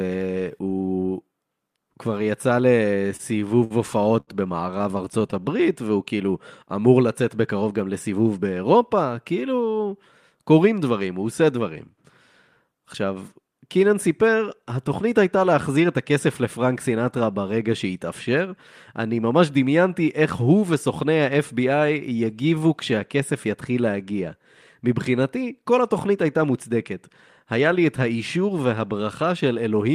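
From 3.07 to 5.34 s the speech shows repeated stalls (stutter). Packets arrived late, so the jitter buffer kept running dry and the receiver stretched the last sound across seventeen short holes, the longest 73 ms. Nothing is lost, which separates this from dropouts; the speech just catches and drags.

Between 15.69 and 16.42 s a jitter buffer speed-up trims roughly 50 ms by cutting pieces of one or a few pitch periods, running at 105% with unchanged pitch. Unlike a resampling error, the voice stays at its pitch and simply sounds hurried.

From 21.79 to 22.96 s a jitter buffer slow-down repeats pitch periods to rebuild the reserve, adding 98 ms and playing at 92%. The sounds are drawn out, rather than showing stutter's discrete catches.

A second speed-up from 25.29 to 27.69 s runs at 106%, removing about 150 ms over a longer stretch.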